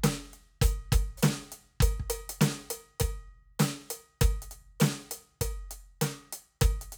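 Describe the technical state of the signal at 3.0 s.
At 3.0 s the music signal is intact, with no audible technical fault at that moment.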